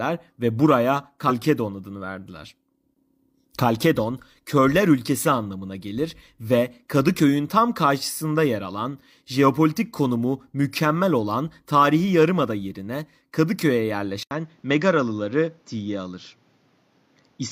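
Speech recording with two separate faults. At 1.26 to 1.32 s a brief blip of about 60 ms breaks the sound, the mark of damaged data in a compressed stream. The decoder hits corrupted frames, loses sync and picks up again at the next valid header. At 14.23 s there is a short silence of about 80 ms, and from then to the end the sound is duller, with nothing above 7.3 kHz. A new, fairly low background noise sits about 40 dB under the signal, and loudness stays roughly the same. The likely cause is that the input switched to a poorer device. Simple filtering or an EQ change would narrow the band without the gap at the switch or the different noise floor, which point to a different microphone path taking over.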